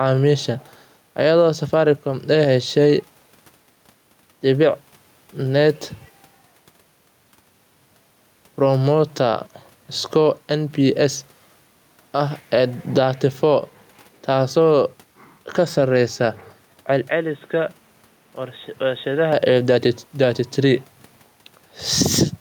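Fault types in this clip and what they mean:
Gain pumping: The level breathes all the way through, with a swing of around 5 dB. That pattern likely comes from the input gain being set too hot, so a fast limiter or compressor keeps clamping down on every peak. Loud and quiet passages end up squeezed closer together, giving the whole thing a flattened, squashed feel.
Input switched to a poorer device: From about 17.08 s to 19.33 s the sound suddenly turns dull and boxy, with nothing left above 3.8 kHz. It drops by roughly 10 dB and brings a new noise of its own, sitting around 30 dB under the speech. There's no gap at the changeover. It's likely the system jumped to a different, narrower-band input, such as another mic or a headset's call mode, before switching back.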